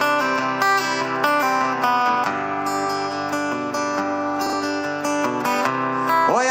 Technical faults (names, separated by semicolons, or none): frames out of order